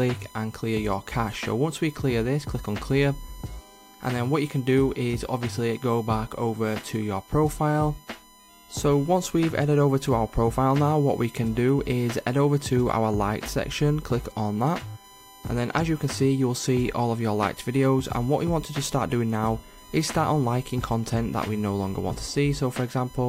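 Current drawn by the USB bus in 1 ms frames is leaking into the audio through the power or ground, producing USB whine across the whole clip: a steady, fixed-pitch tone at 1 kHz, strongest there, sitting roughly 25 dB below the wanted sound.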